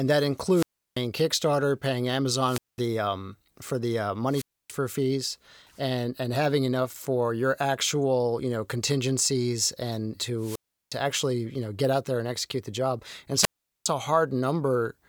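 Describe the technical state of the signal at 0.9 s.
A wireless microphone squelch dropout runs from 0.51 to 1.01 s, so at 0.9 s the signal sits inside it. The analogue FM radio link from the microphone weakened until the receiver's squelch shut the output off, leaving a hole of near silence lasting about 340 ms. Around that muted stretch a short swell of hiss or static can be heard as the signal fades, and the speech comes back.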